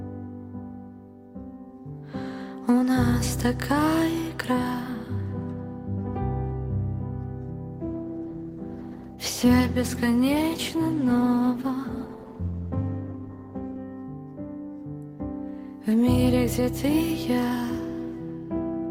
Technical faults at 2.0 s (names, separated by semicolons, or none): none